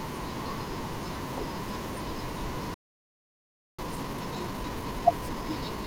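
Speech that cuts out mid-flow at 2.74 s and stays silent for about 1.04 s, resuming at 3.79 s: a playback stall, likely the player starving of data or its output thread being blocked until it could refill and carry on. For that whole second nothing reaches the output, so the gap sounds like an abrupt dropout rather than a natural pause between phrases. From 3.79 s to the end the speech is hurried, running at 1.25 times normal speed yet keeping its normal pitch. This is time-compressed catch-up: to recover the backlog built up during the stall, the player trims out small slices of audio and cross-fades across the joins, which shortens the timeline without shifting pitch.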